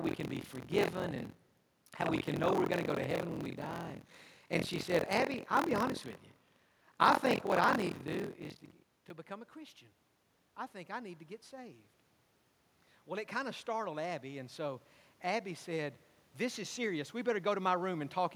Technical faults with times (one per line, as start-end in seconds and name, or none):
13.06-16.00 automatic gain rising